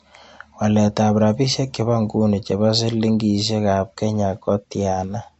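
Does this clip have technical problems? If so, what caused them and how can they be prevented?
Yes. Low-bitrate audio saved at a high bitrate, throughout: the speech has nothing above 7.9 kHz and sounds dull, likely because a low-bitrate MP3, around 48 kbit/s, was re-encoded at a high bitrate, which cannot restore the removed detail. To prevent it, encode from the original uncompressed recording, never from an already compressed file.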